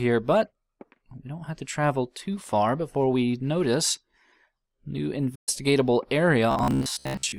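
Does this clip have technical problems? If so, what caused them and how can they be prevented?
Yes. At 5.35 to 5.49 s the sound drops out in mid-flow for about 120 ms before continuing: a playback stall. Likely the player ran out of data or its thread was blocked. Larger buffering and a higher-priority audio thread prevent this.

From 6.51 s to 7.38 s the sound turns into a rigid, metallic buzz at 66.8 Hz. This is robotic sound from repeated short buffers, likely caused by audio arriving too seldom, so a chunk of about 15 ms was replayed while most of the real audio was skipped. Steadier, more frequent buffer delivery prevents it.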